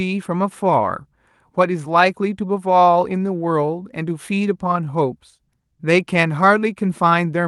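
Throughout the speech, there is clock drift between sender and receiver: the sender's clock runs roughly 1.5% slow, so the receiver's jitter buffer keeps draining. From 0.08 to 7.28 s, repeated timing corrections stretch playback to 98% speed, adding about 150 ms. They sound like faint hiccups and unsteady pacing, and show on the waveform as small, unevenly spaced duplicated segments. The Opus call path shows a spectrogram ceiling near 12 kHz.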